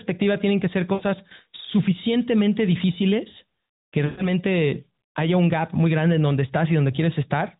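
Lost AMR speech frames occur at 0.94–1.02 s, after "tienen que ser", and at 4.06–4.29 s, after "suficientemente difíciles que". About 60 ms and then 120 ms are lost, which fits three and six 20 ms frames. The narrowband decoder stretches the last sound into a drawn-out smear that fades, rather than cutting to abrupt silence or clicking.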